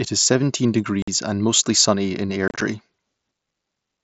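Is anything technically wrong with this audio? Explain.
Yes. Unconcealed Bluetooth headset packet loss occurs at 1.02 to 1.08 s and 2.48 to 2.62 s. Voice packets between headset and phone dropped, leaving silence or an idle pattern in their place: about 53 ms as hard-edged holes first, then 75 ms of gaps scattered across 135 ms, runs up to 30 ms, giving a chopped crackle. The wideband mSBC link carries the speech with light graininess.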